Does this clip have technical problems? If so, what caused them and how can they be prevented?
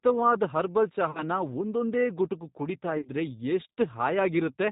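Yes. The whole clip carries G.729 codec damage. The speech is band-limited to below 4 kHz, with a rough, slightly synthetic edge from the coder rebuilding each 10 ms frame from a vocal-tract filter, a pitch predictor and a few pulses. That fits an 8 kbit/s G.729A-type link. It differs from plain low-pass filtering or MP3 smearing because the roughness sits in the voicing itself, not as swirly high-frequency artefacts. Prevention: negotiate a wideband codec such as G.722 or Opus instead of G.729.

VoIP packet loss concealed by the speech codec occurs at 1.11 to 1.23 s, just before "ಒಂದೊಂದೇ ಗುಟುಕು ಕುಡೀತಾ", and again at 2.97 to 3.10 s, just after those same words. The first gap sounds like roughly 40 ms lost in one run. The second is patchier, spread over about 80 ms with its longest hole near 40 ms. In each, the decoder stretches the last pitch and filter into a fading buzzy tone or coloured noise, and the voice stays weak briefly after packets resume. 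That stretched, fading sound and slow recovery set it apart from a hard dropout or click, which is silent or abrupt. Prevention: use a jitter buffer and forward error correction, and prioritise voice traffic on the network.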